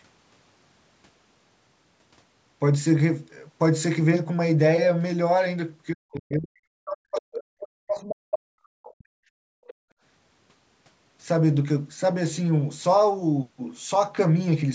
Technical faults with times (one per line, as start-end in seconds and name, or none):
5.92-9.25 speech suppressed in double talk
6.15-6.20 other side's voice leaking through
8.09-8.13 other side's voice leaking through
9.53-9.96 background gated by the echo canceller
9.68-9.74 other side's voice leaking through